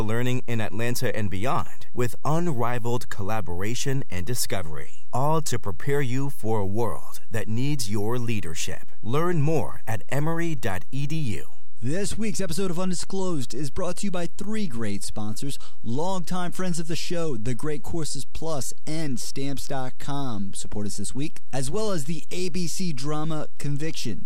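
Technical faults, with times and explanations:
Throughout: DC offset of about -16 dBFS shifts the entire waveform off zero, adding no audible tone but eating headroom and leaving constant energy at 0 Hz.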